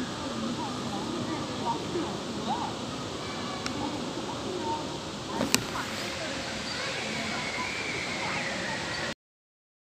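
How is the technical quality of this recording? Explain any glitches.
The recording has one clear fault, a cut-off end. At 9.13 s the sound stops mid-event: the final buffers were never written, so the audio drops straight to digital silence with no natural decay. On a waveform the signal ends in a vertical edge to a flat line; a spectrogram shows energy ending abruptly at that instant.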